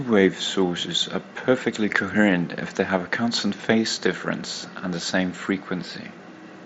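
Nothing technically wrong turns up in this speech clip, which comes through a Bluetooth mSBC headset link working just as that path normally does.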